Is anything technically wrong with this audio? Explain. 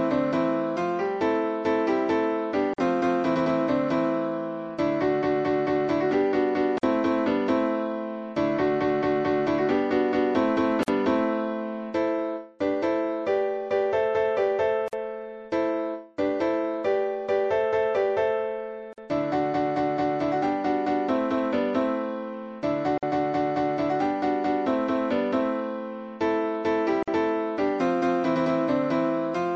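Yes. There are two problems.

Throughout, the sound is plainly degraded. It has a watery, swirly quality, with smeared attacks. This is likely MP3 compression, and the damage fits a low bitrate around 64 kbps. Short of bits, the encoder drops weak frequency lines, which flicker between frames.

There is also a gap at a join of encoded pieces at 2.74, 6.78, 10.83, 14.88, 18.93, 22.98 and 27.03 s, roughly every 4 s. The first gap lasts 47 ms and the rest 49 ms. Separately encoded pieces were joined untrimmed, leaving encoder delay and end padding. Continuous sound drops out briefly, then resumes where it stopped.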